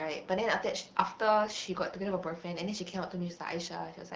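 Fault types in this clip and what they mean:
AMR bit errors: between 1.45 and 1.56 s, flipped low-protection bits across roughly five frames misplace excitation pulses and skew gain and spectral values, so speech turns gargly and scratchy at roughly unchanged pitch; a spectrogram shows harmonics smearing into hash while waveform level holds.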